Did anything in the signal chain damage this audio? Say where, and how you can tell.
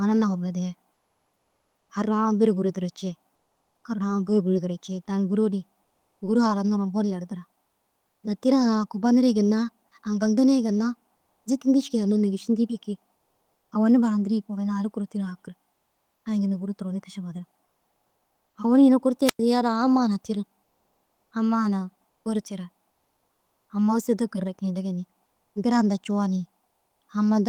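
Yes. In the codec stage, the real background in pauses is swapped for comfort noise at 0.97–1.87, 3.37–3.73, 7.69–8.23, 22.09–22.21 (between "amma huna" and "buru tîra") and 26.65–27.01 s. The quiet background, about 51 to 53 dB down, turns flat and featureless and drops about 1 to 3 dB. This is likely Opus DTX pausing transmission while the receiver synthesises noise.

At the radio link, before conversion, there is a wireless microphone squelch dropout at 19.25–19.39 s, just before "ziyaada amma hunaa tîra". The FM signal fades. The receiver's squelch then mutes the output for about 100 ms, leaving a hole of near silence before the speech resumes.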